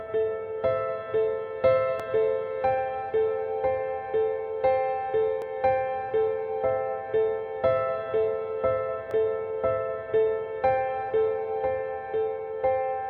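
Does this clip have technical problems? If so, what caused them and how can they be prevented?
Yes. Three isolated sharp clicks occur at 2.00 s, 5.42 s and 9.11 s, each showing as a thin vertical line across the spectrum. They are likely dropped samples: well under a millisecond of the stream is missing at each point, so the waveform jumps straight to a later value and the discontinuity produces the click, while no audible sound is lost. To prevent this, use adequately sized buffers and a stable clock so the capture or transfer path never skips samples.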